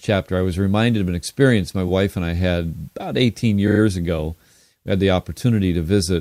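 Repeated frames at 3.67 to 3.80 s: one 40 ms compressed block plays three extra times, so the speech stutters and runs 120 ms longer.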